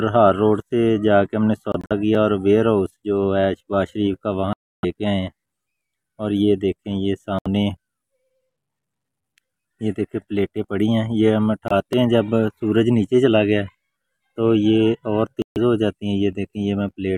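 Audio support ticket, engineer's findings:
Bluetooth dropout, five instances. Audio holes at 1.72–1.92 s (several short gaps, about 93 ms lost, longest about 46 ms), 4.53–4.85 s (0.3 s), 7.39–7.47 s (70 ms), 11.68–11.72 s (23 ms), 15.42–15.58 s (140 ms). Likely late packets to headphones, discarded; output silent until valid packets arrive. Playback resumes further on, not where it stopped.

Block of digital silence, two instances. Ticks at 2.15 s (0.85 ms) and 11.93 s (2.4 ms). Samples zeroed, hard cut with no fade. Probable cause: output buffer not filled in time by the playback software.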